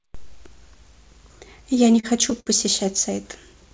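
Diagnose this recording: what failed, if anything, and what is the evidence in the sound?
At the network and jitter-buffer stage, two packets arrived late and the buffer ran dry, causing a short stall from a late packet at 2.00 to 2.06 s and 2.40 to 2.49 s. Each time, speech was stretched by 32 ms, then 59 ms, with a faint buzz or dip, but nothing was lost.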